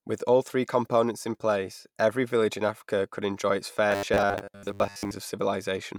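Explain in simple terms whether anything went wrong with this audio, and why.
From 3.91 to 5.11 s the speech turns into a stiff metallic buzz at about 100 Hz. This is robotic sound from repeated short buffers, likely caused by audio arriving too slowly. A tiny 10 ms slice keeps being replayed over most of that stretch. Unlike a simple pitch change, the buzz holds one fixed tone while the speech underneath only roughly survives.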